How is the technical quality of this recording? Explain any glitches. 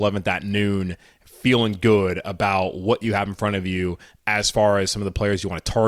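No technical glitches are audible in this recording.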